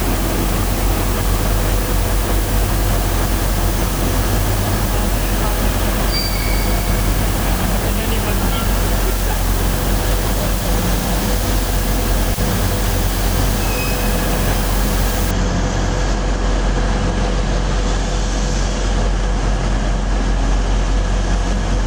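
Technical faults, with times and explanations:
0.0 to 15.31 s, low bit depth with dither: a steady, even hiss sits close under the sound, only about 10 dB below it, yet nothing crunches or distorts. The audio is carried on just 4 bits, and added dither turns the coarse rounding error into this constant white noise.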